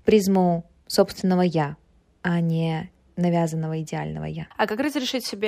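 No technical faults are audible.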